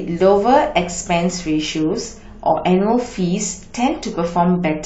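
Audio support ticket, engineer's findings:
Adaptive stream at a lower bitrate, 1.69 s to end of clip. Abrupt drop in speech quality, no gap or dropout. Codec artefacts rise. Probable component: adaptive streaming client. Mechanism: throughput fell, so the player switched mid-stream to a lower rendition. The artefacts fit AAC-LC falling from roughly 96 to 32 kbit/s. Encoder discards high band, coarser quantisation.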